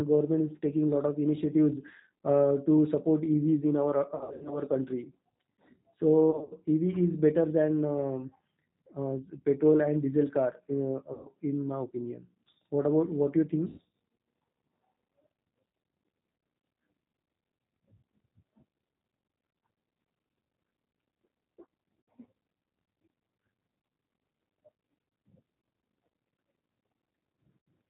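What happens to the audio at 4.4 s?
Between 4.15 and 4.59 s there is VoIP packet loss concealed by the speech codec. About 260 ms of audio is missing, scattered over 360 ms with runs up to 80 ms. The decoder fills the gaps by extrapolating its last pitch and filter at falling gain, so the sound smears into a buzzy tone or coloured noise that fades, and stays weak for a moment after recovery.

Under this, as across the whole clip, the G.729 codec is plainly audible. The band is capped at 4 kHz, and the pulse-coded excitation gives the speech a rough, synthetic edge, which fits an 8 kbit/s G.729A stream. That same model is what generates the concealment sound.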